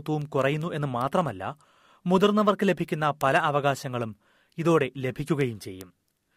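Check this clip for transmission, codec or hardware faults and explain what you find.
One fault runs through the speech: word clock ticks. An unlocked digital receiver drifts against the sender's clock, around 100 ppm, slipping a sample about every 0.2 s. This causes around thirty sharp ticks from 0.22 to 6.21 s.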